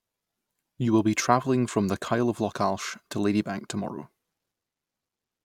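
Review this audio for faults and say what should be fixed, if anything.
Nothing here needs fixing, as no technical faults turn up anywhere in this speech recording.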